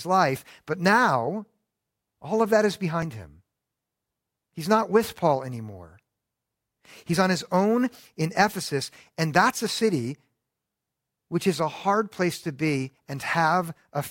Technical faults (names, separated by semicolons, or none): audio missing between chunks